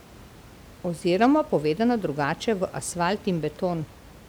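No technical faults are audible in this speech; the steady room noise sits about 23 dB below the voice and belongs to the recording space rather than the signal chain.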